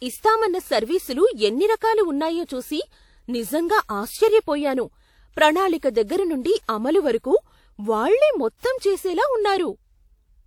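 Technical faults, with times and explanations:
1.76–1.81 s, 2.45–2.49 s and 6.64–6.69 s: pre-echo. A short hiss rises for 57, 42 and 48 ms before sharp speech onsets, then stops at the attack, which sounds softened. The codec spread coarse block-wide noise ahead of each onset. Unlike reverb or ringing, it comes before the attack rather than after.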